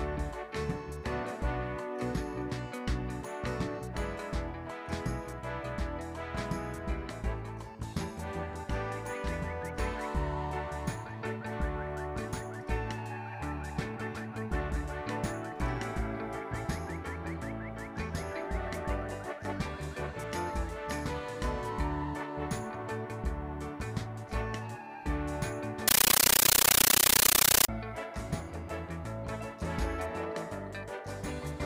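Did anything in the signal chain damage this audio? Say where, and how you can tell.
Yes. From 25.88 to 27.69 s, loud chattering static of 13.3 ms bursts repeating 31.25 times a second. This is a compressed stream played as audio: an undecoded AC-3 bitstream sent to playback as raw samples.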